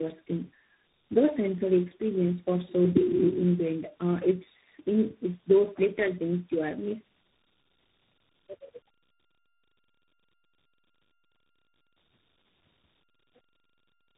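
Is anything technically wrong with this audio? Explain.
Yes. Tandem speech coding affects the whole clip. The speech passed through what sounds like four speech codecs in a row, each re-encoding the previous one's damage. Nothing reaches above 3.8 kHz. The combined roughness, muffling and warble exceed what any single low-bitrate link would produce.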